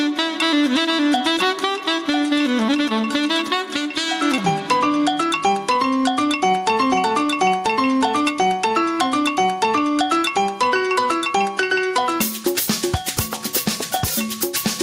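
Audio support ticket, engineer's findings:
Gain pumping throughout: gain swings around 10 dB with loud sounds. Likely input gain set too high, with a fast limiter clamping every peak.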